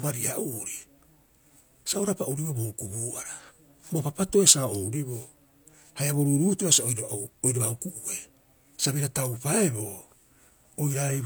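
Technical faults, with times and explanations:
Throughout: low-bitrate audio saved at a high bitrate. The speech reaches 20.1 kHz, yet sounds like 48 kbit/s HE-AAC, likely re-encoded as 192 kbit/s MP3. Lost detail stays lost.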